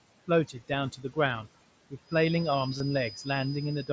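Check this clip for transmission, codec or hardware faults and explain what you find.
Three faults are audible in this speech clip: noise suppressor artifacts throughout, a feedback whistle over the final two seconds, and one short burst of concealed Bluetooth headset packet loss.

Noise suppressor artifacts run through the whole clip. The background sinks away in the gaps and swells back under the speech. A noise suppressor is cutting the bands it judges to be steady noise, frame by frame, by about 18 dB.

A feedback whistle comes in at 2.0 s and lasts to the end: a thin, steady tone at 5 kHz, well below the speech and wavering slightly in level. The likely cause is a loudspeaker-to-microphone loop held just short of runaway feedback.

Concealed Bluetooth headset packet loss occurs from 2.78 to 2.80 s. For about 22.5 ms a brief buzzy, held tone replaces the sound, with a small warble as real audio resumes. 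That length fits roughly three lost frames, which the receiver filled by repeating recent waveform.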